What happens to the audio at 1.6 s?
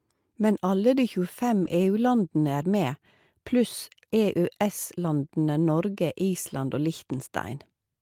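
At 1.63 to 1.73 s, a lost packet rebuilt from error correction: the missing speech was replaced by lower-bitrate copies carried in the following packets, consistent with about three lost packets. There is no gap, but the sound turns briefly rougher and noisier. The waveform stays continuous across that span.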